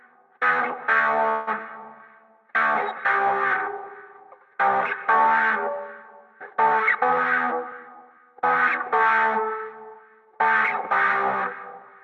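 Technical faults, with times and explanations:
1.29 to 1.49 s, call audio freeze: the sound hangs for about 0.18 s. The last bit of audio stretches into a short buzzy, fading tail, and then the sound picks up exactly where it left off, with nothing skipped. That pattern is most likely packets arriving late and the jitter buffer running dry, so the receiver pads the wait with synthetic filler and inserts a gap rather than losing any material.
1.88 to 6.55 s, call bitrate drop: the sound turns coarse and somewhat watery, and the top end dulls. The highs stop at about 12 kHz where they'd been reaching 16 kHz. It's at its roughest for roughly 1.9 s before things recover. That fits the encoder being pushed from about 96 kbps down to around 28 kbps after the bandwidth estimate fell. It quantises much more crudely and trims the upper band to save bits.
7.43 to 8.63 s, jitter buffer speed-up: the sound runs noticeably quick, about 109% of normal speed, with no pitch shift, so it just feels hurried for that stretch. 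The jitter buffer had built up more audio than it wants, so the receiver shaved out lots of tiny pitch-period-sized slices in a row. Together they add up to about a tenth of a second, which brings the delay back down.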